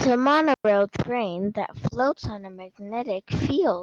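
From 0.54 to 0.65 s, just before "train that", there is a digital wireless dropout. The receiver lost too much of the incoming data stream and muted its output for about 110 ms, applying a very short fade at each edge. The result is a clean hole of near silence, with no crackle, hiss or noise burst on either side. The sound resumes cleanly once the link recovers.

From 1.87 s, right after "train that", and continuing to the end of the clip, there is a call bitrate drop. The link's bandwidth estimate fell, and the encoder was forced to spend far fewer bits on the signal. The degradation points to a cut from around 48 kbps to about 15 kbps, with the lowest rate holding for roughly 1.3 s. The coarser coding gives the sound a rough, watery texture that does not clear before the clip ends.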